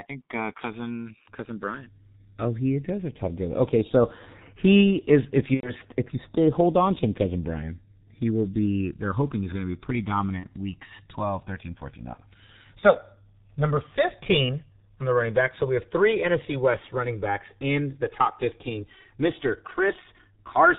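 It's a speech recording, and the whole thing runs through the G.723.1 codec at 6.3 kbit/s with heavy damage. Nothing comes through above 4 kHz, so the voice is muffled and hoarse and the consonants smear because the codec's voice model updates so slowly. There's also the channels drifting apart effect. The two sides run on clocks that disagree by roughly 200 ppm, so by the end the offset has crept to about 3 ms. In mono that turns into a slow, sweeping flange as the comb notches move through the spectrum. On top of that, there are three spots of VoIP packet loss concealed by the speech codec. The first runs from 5.54 to 5.72 s, just before "if you stay hold", which fits about three lost 30 ms frames. The second is 10.40 to 10.47 s, right after "be pretty", and the third is 12.14 to 12.21 s. Each one fits a single lost frame. At each gap the decoder stretches the last sound into a fading buzzy tone or coloured noise, and the voice stays weak for a moment after audio returns.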